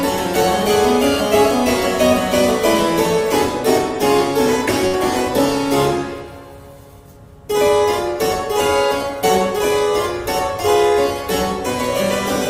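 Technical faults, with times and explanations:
4.87 to 4.95 s, burst of packet loss: a run of packets was lost or arrived too late for playback, leaving a gap of about 57 ms that the receiver concealed by extending the last received sound and fading it down over the gap. Depending on that sound, this yields either a held buzz or a decaying hiss. Playback then resumes with about 60 ms of the original audio skipped.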